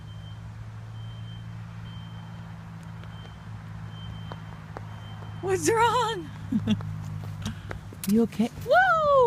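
No technical faults are audible.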